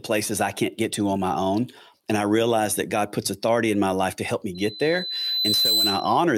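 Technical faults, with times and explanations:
4.55–6.23 s, loudspeaker feedback squeal: just after "life to help me", a 4 kHz tone swells over roughly a second to about 5 dB above the speech as the microphone-speaker loop exceeds unity gain.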